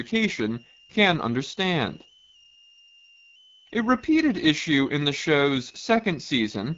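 From start to finish, a switching supply whistle sits around 30 dB below the speech, wandering between 2.5 and 3.0 kHz. Unlike mains hum, it is high and pitch-shifting rather than low and fixed. Throughout, the speech also carries plainly audible AMR wideband (HD Voice) codec damage, rough and raspy, with nothing above 7.5 kHz. That fits the 8.85 kbit/s rate, and unlike a simple low-pass, the texture itself is degraded.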